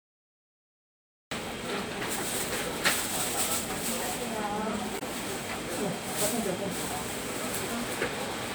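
From 0 to 1.31 s there is only digital silence, and at 1.31 s the sound begins abruptly in mid-event. This is a cut-off start: capture began late. The waveform sits flat and silent, then jumps straight into the sound with no attack, and the spectrogram shows a hard vertical edge.

Between 4.95 and 5.02 s, damaged data in a compressed stream produces a brief glitch. Corrupted frames threw the decoder out of sync until it found the next valid header. On a spectrogram this appears as a short smeared, blocky patch of scrambled energy, with a discontinuity in the waveform.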